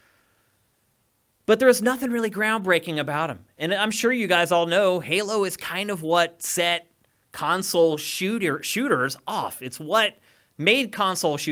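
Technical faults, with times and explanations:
No technical faults can be heard anywhere in this speech recording. There is nothing to list with a time or an explanation.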